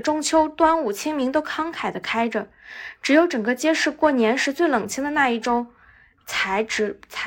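From start to finish the speech carries periodic clock jitter. Something is wobbling the converter's sample clock at a steady rate of around 1 kHz, so every frequency in the voice picks up sidebands spaced that far above and below it, more strongly in the higher range like sibilants. You hear it as a rough, metallic fizz clinging to the voice, and it drops away entirely in the pauses between phrases.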